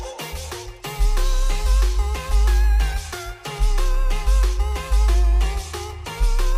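From 0.52 s to 6.52 s, a click recurs every 0.6 s, about ten in all. These are likely clock drift buffer slips. Two unsynchronised clocks differ by a few hundred parts per million. The buffer overflows or underflows, dropping or repeating a handful of samples each time.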